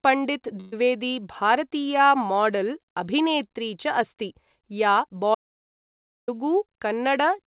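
Speech, carried over a narrowband call line that leaves nothing above 4 kHz, with two distinct faults. From 0.60 to 0.74 s the sound doesn't stop but smears into a brief held, fading tone before picking up again slightly ahead of where it left off. That is a burst of packet loss: about 120 ms of audio never arrived in time, and the receiver filled the hole by stretching and dimming the last sound it had. The speech then resumes past the missing stretch, so that portion is gone. Later, from 5.35 to 6.28 s, the audio drops abruptly into dead, total silence with no background hiss or room sound, then cuts back in mid-flow. This audio dropout to silence removes roughly 0.93 s of material. The plain silence, rather than a fade or concealment, points to the input likely being lost at the source, through a disconnected device, a broken link or a brief mute, while the recording carried on writing silence.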